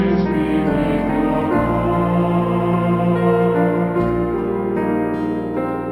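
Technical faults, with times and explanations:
0.32–5.91 s: imaging from linear upsampling. Straight-line interpolation, consistent with 12 kHz raised to 48 kHz, dulls the top and leaves faint 6–12 kHz mirror images, about 40 dB down, as metallic shimmer.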